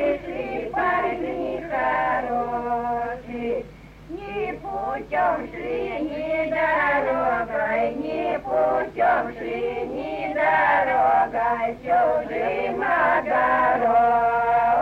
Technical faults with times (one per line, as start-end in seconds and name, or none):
none